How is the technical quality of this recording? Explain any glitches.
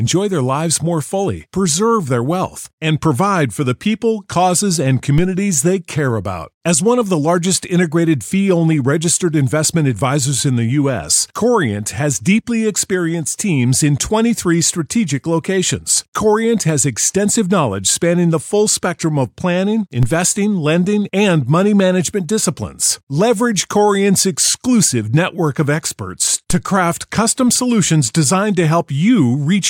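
The recording has three DC steps, sudden shifts in the waveform's zero line. They occur at 5.18 s, between "the people causes and" and "they care about"; at 20.03 s, between "spectrum of planning planning" and "lending and money management"; and at 26.50 s, between "exclusive network of experts" and "to craft custom solutions". Each offset jumps by about -10 to -11 dBFS and then drains away through a 5 Hz high-pass. Each step is heard as a brief low thump while the speech continues unaffected.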